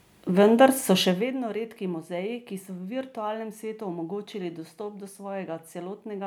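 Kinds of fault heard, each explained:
No kinds of fault are heard in this speech.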